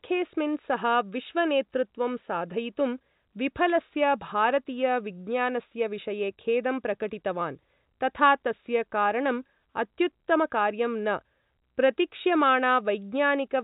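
Nothing faulty is audible anywhere in this speech.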